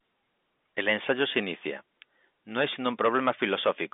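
No technical faults are audible.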